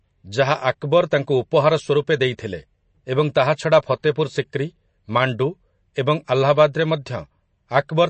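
From start to finish the speech carries plainly audible MP3 compression damage. Nothing remains above about 8.3 kHz, so the top octave is simply missing and sibilants sound dull and clipped. The remaining band has a watery, swirling texture, with faint spectral detail flickering in and out as the encoder drops weak frequency lines frame by frame. That points to a starved bitrate, likely in the region of 35 kbps.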